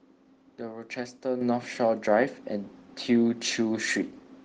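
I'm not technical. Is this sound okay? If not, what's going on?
No, not quite. At about 1.41 seconds the whole sound suddenly gets louder in one jump. This is a microphone volume stepped up fault. The call software decided the microphone was too quiet, so it turned up the microphone's input level all at once instead of gradually. Because the change happens at the microphone, the speech and the background noise both get louder together.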